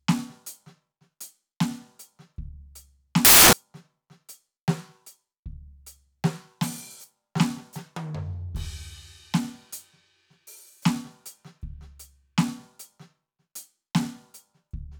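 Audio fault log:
3.25 to 3.53 s, samples built from the wrong bytes: for about 0.28 s the music is swamped by loud, harsh broadband noise. The reader assembled each sample's bytes in the wrong order or alignment, so the rapidly changing low bits landed in the high part of every value and turned the waveform into near-random hash.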